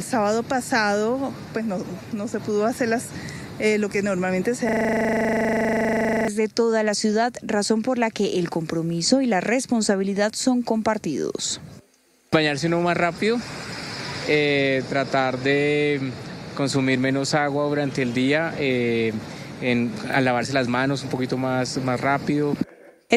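A system hang loop runs from 4.69 to 6.28 s. For about 1.6 s the audio stops moving forward and one 40 ms fragment repeats exactly, roughly 40 times in a row, producing a rattling buzz at 25 Hz. This is what happens when the computer or audio driver freezes but the sound hardware keeps replaying the same stretch of its ring buffer. The loop length points to a buffer holding about 40 ms of audio.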